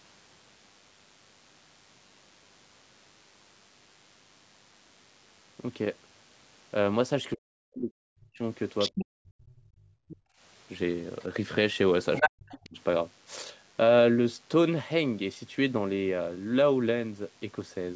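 Throughout the clip, a nearby DECT cordless phone or base station is sending radio bursts every 10 ms, and the audio circuit rectifies them into the signal. The result is a DECT cordless phone buzz: a steady, thin 100 Hz drone with a ladder of harmonics, sitting well below the speech, roughly 35 dB down. It rides under everything else described here.

From 7.34 to 8.42 s the speech falls away. It drops by as much as 40 dB at its deepest, for about a second in all. This is likely speech suppressed in double talk: with both parties talking, the echo canceller could not tell the near talker from loudspeaker echo and turned everything down. The same dips return from 8.92 to 9.59 s and from 12.26 to 12.77 s, each lasting about half a second, and the voice thins or cuts out in pieces.

At 8.79 to 9.06 s a second voice comes through only a little below the talker. This is likely the other side's voice leaking through, where the echo canceller left part of the loudspeaker signal in the microphone feed. 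A faint scrap follows at 10.08 to 10.16 s, far below the speech. At 12.15 to 12.3 s the leaked voice briefly sits louder than the talker, and another faint fragment appears at 12.51 to 12.69 s.

From 9.87 to 10.41 s the echo canceller clamps the microphone hard while the loudspeaker plays. This is background gated by the echo canceller: the room sound drops by about 29 dB for around half a second, leaving a hollow gap, then comes back when the canceller releases. The call microphone processing is working as expected, and nothing comes through above 8 kHz.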